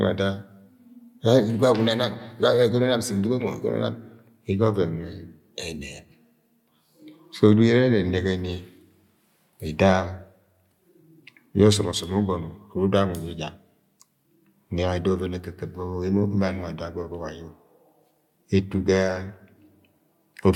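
No technical faults can be heard anywhere in it.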